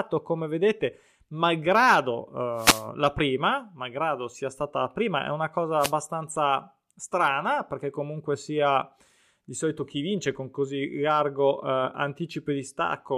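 Wireless microphone noise hits at 2.55–2.86 s, before "la prima malgrado sia", and 5.79–5.93 s, after "prima è una cosa": the FM radio link faded, letting receiver static swish over the speech.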